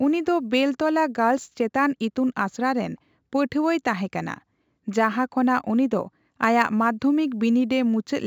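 Sample clock jitter runs through the whole speech clip. The converter's sampling instants wander by a few microseconds at random, so each sample is taken slightly off time and the resulting amplitude error scales with how steeply the waveform is changing. It sounds like a fine hiss or grit riding on the speech, sitting around 40 dB below the signal, most audible on loud passages and sibilant detail up toward the 8 kHz band limit, and gone in the pauses.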